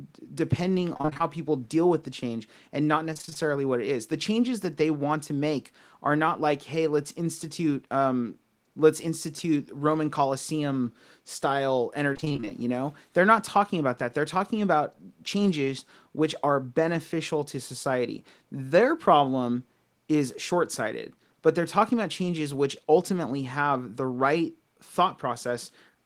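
Repeated packet loss (robotic sound) hits this speech clip three times: 0.93–1.21 s, before "people deal with the"; 3.13–3.37 s, between "the change and not" and "what it is"; and 12.13–12.52 s, before "you know". In each stretch, short gaps of roughly 20–25 ms arrive in quick succession, about seven, six and ten of them. Each gap is bridged by extending the preceding sound, so about half of every stretch is synthetic fill, heard as choppy, robotic speech.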